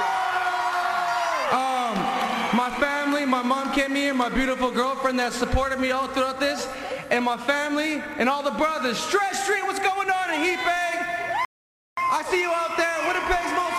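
At 11.45 s the sound drops to silence until 11.97 s, then resumes exactly where it stopped: a rebuffering stall, where playback ran dry and waited for data, adding about half a second.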